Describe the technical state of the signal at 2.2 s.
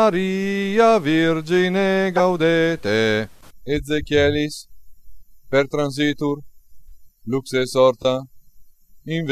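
At 2.2 s there is a corrupt frame decoded, from 2.17 to 2.20 s. Damaged bits in a single compressed frame were played as if valid, so energy lands at wrong frequencies, heard as a brief chirp, squeak, blip or burst of noise, with the error peaking around -5 dBFS. A spectrogram shows a brief vertical smear; the waveform shows a sudden spike.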